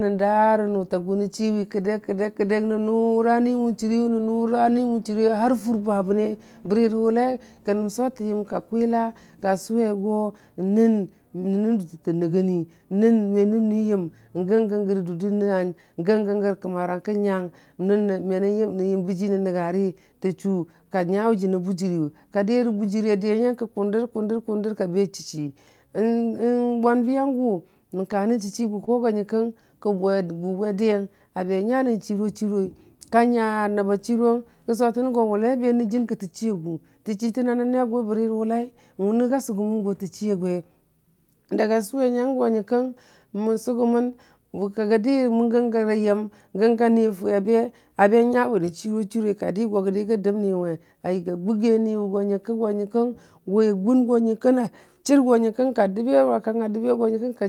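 Speech that plays with a slightly slow, unsteady tempo from about 0.26 s to 57.3 s, with faint hiccups scattered through it. This is clock drift between sender and receiver. The sender's clock runs a few percent slower than the receiver's, so the receiver's jitter buffer keeps running short and has to be topped up. The sender never quite keeps pace, and small stumbles recur at uneven intervals for the whole clip. The receiver's answer is a series of repeated timing corrections. It keeps stretching the audio by repeating short slices, which slows playback to 98% and adds about a second and a half in total. Every edit goes the same way and none is large on its own, so together they come across as a gently dragging, slightly lurching rhythm rather than distinct glitches. On top of this are four bursts of scattered short gaps, at 3.64 to 8.55 s, 13.36 to 18.02 s, 27.39 to 34.17 s and 42.84 to 45.47 s. 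Each burst holds a handful of tiny holes, mostly just a few milliseconds long, where packets arrived late or went missing. The receiver covered each one by extending the preceding sound, leaving brief ticks or smears. The longest, around 30 ms, falls in the 27.39 to 34.17 s stretch.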